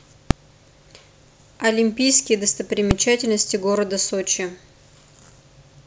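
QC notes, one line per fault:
0.31 s and 2.91 s, invalid numbers at full scale: a loud bang at each of these two points in the speech. A calculation produced infinite or invalid values, and they were forced to the maximum output level for a block of about 2 ms, which fits a 32-sample processing block. With a block that short, the jump to the extreme value and back merges into a single sharp crack rather than two pops with silence between.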